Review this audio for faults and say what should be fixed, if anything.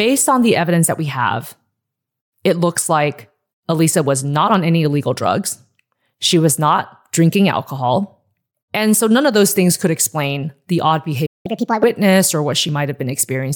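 At 11.26 s the speech drops abruptly into silence for about 0.19 s, picking up again at 11.46 s where it left off. This is a playback stall, likely the player running short of buffered data or having its audio thread blocked. A deeper output buffer and a higher-priority audio thread would prevent it.

From 11.46 to 11.83 s the speech rushes forward, sounding hurried and squeaky, pitched up by roughly seven semitones. This is catch-up at higher speed: the player resamples its backlog at 1.5x to regain the lost time, then returns to normal rate. Pitch-preserving time-stretching, or simply dropping the small backlog, would avoid the audible shift.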